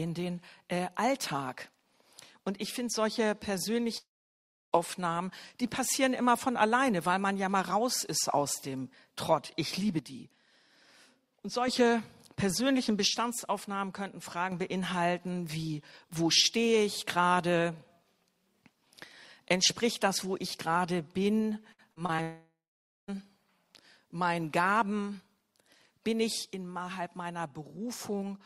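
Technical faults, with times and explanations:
3.97–4.75 s and 22.22–23.10 s, long network dropout: The sound stops for most of a second. A short buzzy tail fades out, then there's plain silence for about 0.67 s and 0.52 s. It resumes with roughly 0.76 s and 0.86 s lost, likely because the stream simply stopped arriving.
9.99–11.68 s, 13.07–14.52 s and 26.53–28.46 s, one channel drops out: Shared content falls by about 6 dB quite abruptly. One stereo channel likely goes missing, so the mono sum loses half its common amplitude until the channel returns or, in the last case, the clip ends.
21.73–22.20 s, repeated packet loss (robotic sound): Four quick holes, the longest 54 ms, each patched by stretching the previous bit of sound. That covers about 28% of the span and gives a choppy stutter right before the 22.22 s dropout hits.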